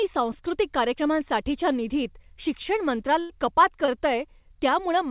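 Speech, heard through a narrowband call path that cuts off everything above 4 kHz, which fits a G.711-style call codec. Right after "कार्यक्रमांसाठीच्या निधीत शिक्षण" there's a burst of packet loss from 3.20 to 3.31 s: the receiver stretches the last sound into a fading buzz or hiss for about 94 ms, then jumps ahead with roughly 100 ms of speech gone. A moment later, from 3.85 to 3.90 s, a short concealed packet loss leaves a brief smear where about 20 ms went missing and got patched with roughly 22 ms of continued sound before blending back into the real audio.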